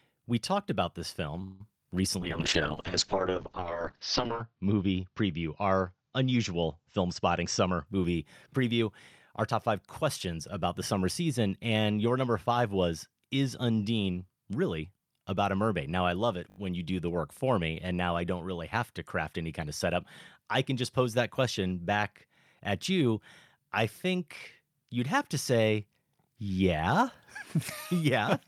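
Right after "we talked about this", from 1.43 to 1.61 s, a call audio freeze stretches the last sound into a fading buzz or hiss for about 168 ms. The cause is likely a jitter buffer that ran dry while packets were held up. Unlike a dropout, nothing is lost: the sound resumes exactly where it stopped, only later.

From 2.20 to 7.91 s a call bitrate drop makes the sound rough and watery, and the top end is cut from 20 kHz to 8 kHz, which fits the encoder falling from about 48 to 8 kbps. The muffled low point lasts about 2.2 s. This is a steady loss of detail, not a gap or a stutter.

Jitter buffer speed-up follows at 7.43 to 8.13 s, where the sound runs 13% fast, with around a tenth of a second trimmed out. It comes again at 9.52 to 10.03 s, 5% fast with roughly 40 ms removed, just before "about the summer season". The pitch stays put, so the sound is hurried rather than chipmunk-like.

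At 16.50 to 16.58 s, between "I love it" and "when you do the", a repeated buffer plays one short slice four extra times, which fits a 20 ms buffer. The hard joins give a brief buzzy stutter. Unlike the freeze, it does not fade.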